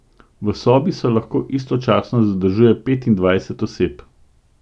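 Speech recording; no technical faults are present at any point.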